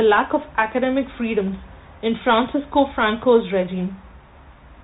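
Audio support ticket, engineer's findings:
Bluetooth CVSD headset codec, whole clip, start to end. Speech band-limited, nothing above roughly 4 kHz. Granular hiss under the speech, scratchy sibilants, distortion on loud high-frequency content. Probable component: headset link, which fits a 64 kbit/s CVSD stream. Mechanism: one-bit up/down delta coding with adaptive step. The step cannot follow fast loud rises, and the coarse quantisation produces the grainy noise floor.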